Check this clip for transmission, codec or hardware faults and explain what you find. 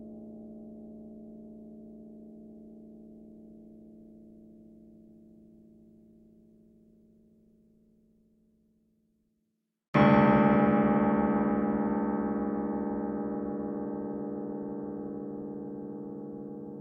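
No transmission, codec or hardware faults can be heard in this recording. Nothing in the sound points to a problem anywhere along its path.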